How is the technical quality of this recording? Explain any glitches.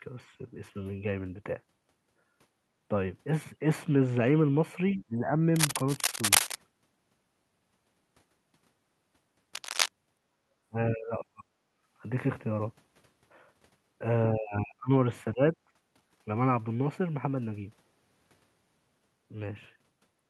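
The recording has several echo-canceller faults and two bursts of contact noise, concentrated between about 5 and 16 s. The closing fade-out from 19.96 s is smooth.

Other side's voice leaking through: From 4.88 to 5.04 s a faint second voice, about 30 dB below the talker, slips in. This is likely loudspeaker playback reaching the microphone that the echo canceller failed to remove fully, so a brief scrap of the far end remains.

Speech suppressed in double talk: The talker's speech drops at 4.96–5.30 s (about 25 dB), 10.68–11.51 s (about 40 dB), 14.35–14.91 s (about 30 dB) and 15.33–15.55 s (about 15 dB). The likely cause is the canceller mistaking simultaneous talk for echo and attenuating everything, so the voice sinks or cuts away in pieces.

Cable scratch noise: Dense, uneven rustling covers 5.56–6.55 s at roughly the level of the speech, and 9.55–9.89 s about 5 dB below it. This likely comes from a worn cable or connector being moved, with its contact resistance fluctuating rapidly and injecting crackly noise bursts.

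Background gated by the echo canceller: At 11.79–11.84 s the room sound dips by 14 dB for 50 ms and then returns. The canceller clamped the microphone hard while the loudspeaker was active and released it almost immediately, leaving a short hole in the ambience.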